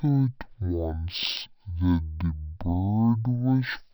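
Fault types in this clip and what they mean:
Stereo read as mono: the left and right samples have been pulled in one after another as if they were a single channel, so this speech runs at half speed and drops a full octave, 12 semitones down, for the whole clip, with a faint mirrored copy sitting up in the top half of the spectrum.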